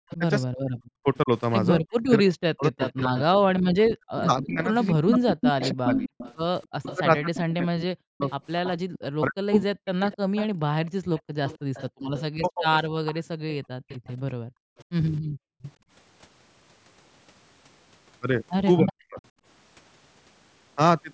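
From 0.05 to 10.79 s the talker keeps dipping, with about 5 s of the stretch pulled down by up to about 40 dB. That's speech suppressed in double talk, likely the echo canceller ducking everything while both ends overlap. The same dips return briefly at 12.32–12.71 s and 18.78–19.2 s.

Layered in is echo leak: a copy of the voice trailing by 262 ms, with a faint scrap at 0.11 s, a clearer patch at 2.62–3.22 s, and a long run from 5.12 to 15.73 s at about 15 dB under the speech. It's likely a loudspeaker's echo slipping past the canceller.

Then there's background gated by the echo canceller: the room sound drops out by about 40 dB for short moments at 11.25–11.74 s and again through 13.68–15.9 s, with about a second gone in total there. The canceller clamps the mic while the loudspeaker plays, then releases it. The call-style mic processing tops out at 8 kHz, which is normal for that path.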